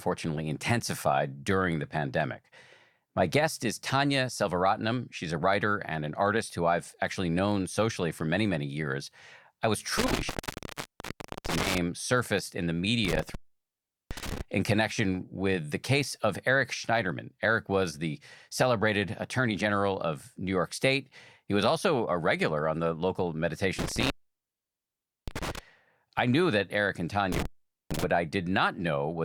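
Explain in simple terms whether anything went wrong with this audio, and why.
The speech drops out four times, from about 9.98 to 11.78 s, 13.05 to 14.41 s, 23.79 to 25.59 s and 27.32 to 28.04 s. That's an intermittent contact: a loose cable or plug briefly losing connection, crackling as it goes, leaving only faint hiss for up to about 1.2 seconds.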